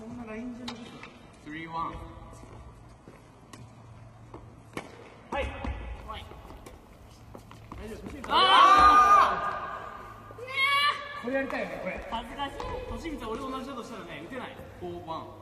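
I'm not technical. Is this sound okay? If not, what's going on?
No. For the first 6 seconds this is an adaptive stream starting at a low bitrate: the player began with a cheap, quick-loading version, so the top end sounds dull and processed, nothing above about 11.8 kHz. At 6.0 s it switches to a better version and clarity jumps up without a break.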